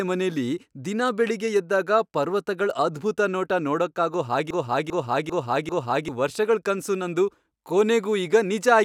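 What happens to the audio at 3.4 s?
Nothing goes wrong at 3.4 s: the speech carries on intact through that moment, with no dropout, click or distortion.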